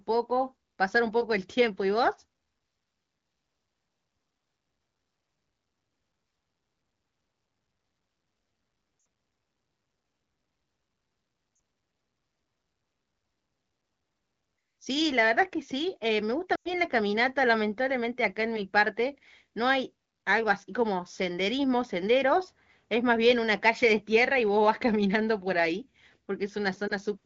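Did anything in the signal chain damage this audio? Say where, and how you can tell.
Yes. The speech briefly smears and fades at 8.99–9.05 s, 11.55–11.59 s, 16.55–16.74 s and 26.87–26.92 s, with the longest gap at 16.55 s dropping to near silence. These are lost AMR speech frames on the radio link. Corrupted frames failed their checksum, so the decoder replayed the last good pitch and vocal tract settings at falling gain.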